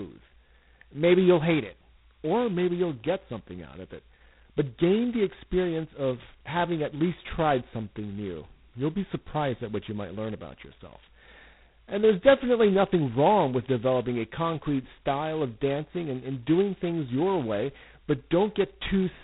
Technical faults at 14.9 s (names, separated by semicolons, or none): G.726 ADPCM